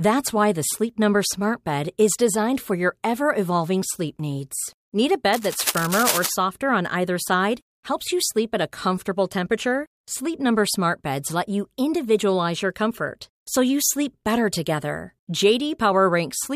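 From 5.33 to 6.33 s, cable scratch noise sits over the speech for about a second: dense, irregular crackling and rustling bursts only slightly quieter than the speech itself. The likely cause is a worn cable or connector being moved, its contact resistance fluctuating rapidly.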